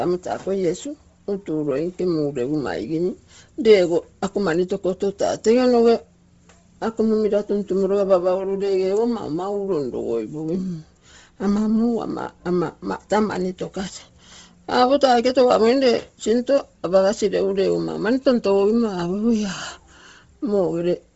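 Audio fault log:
throughout Bluetooth LC3 compression: the speech was likely squeezed hard by a low-bitrate transform codec that drops upper-band detail and fills it with noise, which fits around 24 kbps. Nothing remains above 7.7 kHz, and the voice takes on a breathy, grainy edge.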